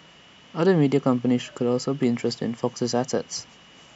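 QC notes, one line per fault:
No faults found anywhere in this speech recording.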